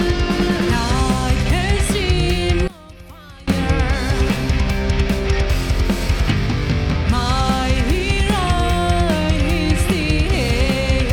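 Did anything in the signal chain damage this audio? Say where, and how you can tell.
Yes. From 2.68 to 3.48 s the sound drops about 22 dB to a faint residue, likely one channel inverted in the analogue wiring, so common content cancels when summed to mono.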